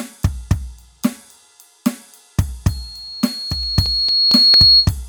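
From 2.69 s a 4.3 kHz tone swells over roughly two seconds into a squeal well above the music, lasting until 4.92 s: loudspeaker feedback squeal, where microphone and speaker form a loop whose gain exceeds one.

Between 3.63 and 4.54 s, five short ticks of uneven strength, the longest about 5 ms: CD scratch ticks, as a scratch defeats error correction once per disc revolution.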